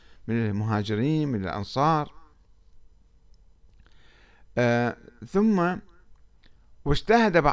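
No technical faults are audible.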